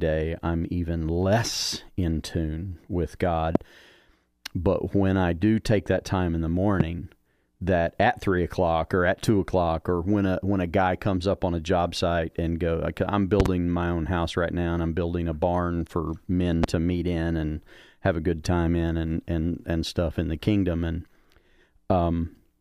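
Loud pops hit at 3.55–3.58 s, 6.80–6.83 s, 13.40–13.48 s (a double pop) and 16.64–16.66 s, peaking roughly 15 to 20 dB above the speech. They are likely from voltage spikes such as static or switching. Unlike dropouts, the speech continues uninterrupted beneath each thump.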